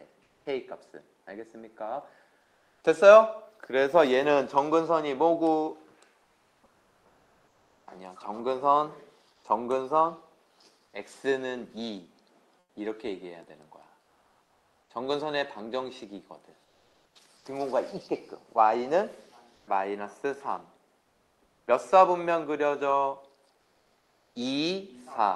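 Comfort noise in place of the background appears in four stretches: 0.23 to 2.81 s, 6.23 to 9.43 s, 12.59 to 17.45 s and 19.55 to 24.35 s. Within them, roughly 0.62 s, 1.74 s, 1.62 s and 1.56 s of the real background give way to a flat, featureless hiss. This is likely Opus discontinuous transmission: the sender goes quiet during pauses, and the receiver fills the gap with synthetic noise shaped only broadly like the original surroundings, so its texture and detail vanish until sound resumes. At 7.85 s there is an onset clipped by the voice detector. About 20 ms of the start is missing, so the sound jumps in abruptly rather than rising in, likely because the detector reopened transmission a moment late and comfort noise covered the lost beginning. All of this travels over an Opus call path whose top end stops near 12 kHz, with coding noise consistent with around 32 kbps.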